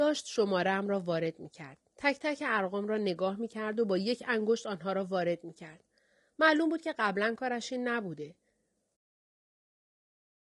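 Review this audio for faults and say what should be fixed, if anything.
Throughout the clip the speech sounds rough and grainy, with noise filling the gaps between pitch harmonics and a thin, synthetic top band. This points to low-delay AAC compression, likely AAC-ELD at a rate that fits about 32 kbps. Its roughly 10 ms frames resolve harmonics poorly, so the graininess follows the voice rather than sitting underneath as steady background hiss. To prevent it, raise the encoding bitrate, or use a longer-frame codec where latency allows. The fade out near 9 s is smooth, with no click.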